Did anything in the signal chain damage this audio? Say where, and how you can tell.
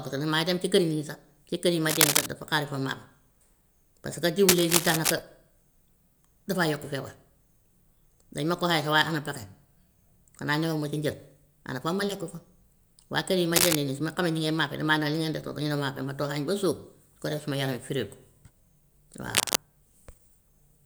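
Yes: scratchy rustling bursts, up to about 5 dB louder than the speech, at 1.89–2.26, 4.48–5.13, 13.53–13.75 and 19.35–19.56 s, likely cable scratch noise from a worn analogue connector's fluctuating contact.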